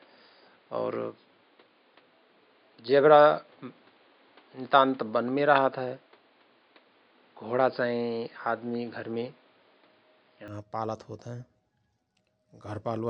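From the start to 10.48 s the speech sounds dull and boxy, with nothing above 5 kHz, likely because the input switched to a poorer device with its own faint hiss. A spectrogram shows that empty top band ending abruptly, without any gap, beside a small waveform level step.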